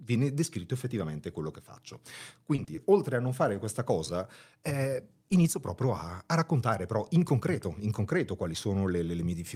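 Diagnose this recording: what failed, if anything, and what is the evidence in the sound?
Short concealed packet loss in the network path: right after "effettivamente quello che faccio", at 2.55–2.60 s and again at 2.75–2.79 s, the speech smears briefly. Each time about 20 ms of audio was lost, and the decoder filled the gap by extending the preceding sound before blending back into the real signal.

A short stall from a late packet sits between those two losses, at 2.64–2.69 s, just before "oltre a non fare". The jitter buffer ran dry, so the receiver held the last sound for about 30 ms until the packet arrived, then continued from the same point. Nothing was lost, but the sound is briefly drawn out.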